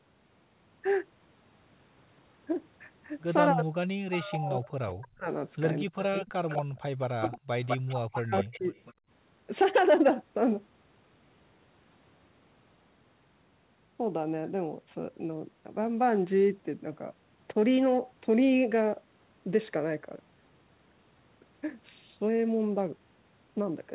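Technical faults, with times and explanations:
3.52–5.28 s, 5.83–7.36 s and 7.88–8.74 s, speech suppressed in double talk: the voice sinks by roughly 35 to 40 dB in pieces, likely because the echo canceller muted both overlapping talkers.
6.00–6.04 s, 6.49–6.62 s, 7.02–7.78 s and 8.39–8.93 s, echo leak: a copy trailing by 204 to 243 ms, about 5 to 30 dB down, likely loudspeaker sound the canceller failed to remove.
9.01–9.09 s, background gated by the echo canceller: the room sound drops by about 32 dB for an instant while the canceller clamps the microphone, then returns.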